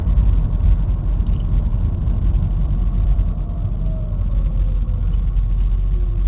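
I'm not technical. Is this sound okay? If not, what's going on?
Yes, this sound is okay; it just has the narrow, phone-like quality of audio sent over a call, which is normal.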